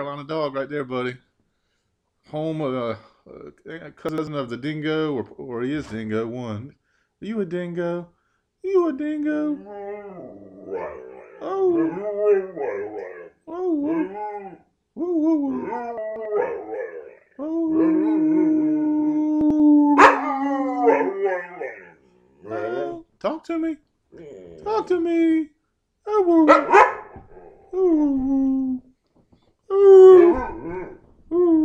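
Brief jumbled stutters occur at 4.09–4.27 s, 15.98–16.25 s and 19.41–19.60 s, where chunks play out of order. Blocks of about 93 ms were written late and play after the blocks that should follow them, creating hard joins. The middle event spans about three blocks, suggesting a block delayed by two places.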